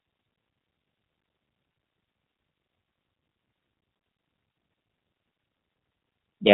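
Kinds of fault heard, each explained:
G.729 codec: throughout, the speech is resynthesised from a modelled vocal tract, a pitch predictor and sparse pulses, which fits an 8 kbit/s coder. Nothing above 4 kHz, and a plainly rough, synthetic texture. A plain low-pass would dull the sound without this buzzy graininess.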